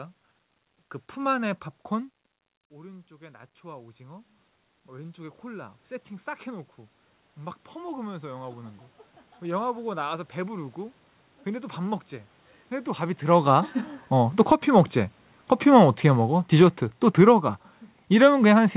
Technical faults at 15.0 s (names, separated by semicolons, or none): automatic gain falling